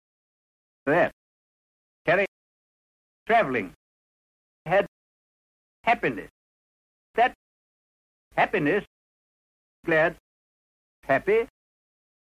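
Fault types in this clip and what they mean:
Nothing stood out on listening that called for comment.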